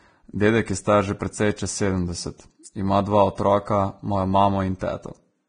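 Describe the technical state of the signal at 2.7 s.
Right around there you get a pre-echo, from 2.63 to 2.65 s, a smear of roughly 26 ms just ahead of a sharp attack in the speech. The codec spreads its quantisation noise across a whole transform block, so noise scaled for the loud onset also fills the quiet gap before it. You hear a short hissy lead-in, and the attack lands soft and blurred rather than crisp.

That sits on top of coding damage that runs through the whole clip, likely Vorbis compression at a low setting, which fits a bitrate of around 23 kbps. There's nothing above 9.7 kHz, and the treble that survives is quantised so coarsely that fine detail has turned into noise of about the same energy. The result is heavy damage: a grainy, hissy top end, roughened tones, and attacks that lose their edge.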